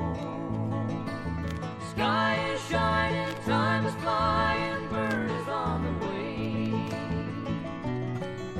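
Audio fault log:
No faults detected on this audio.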